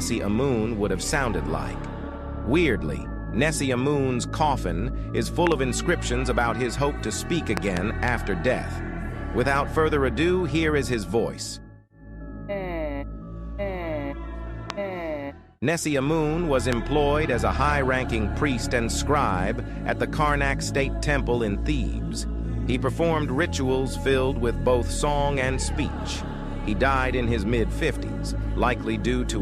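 The clip has four loud pops sitting on top of the sound, which carries on underneath each one: a quick double pop at 5.47 to 5.54 s, another double at 7.57 to 7.79 s, then single pops at 14.70 to 14.72 s and 16.73 to 16.75 s. Each jumps out at about 20 dB above the sound. They're likely sharp voltage pulses from a plug, switch, static or a driver glitch getting into the signal path.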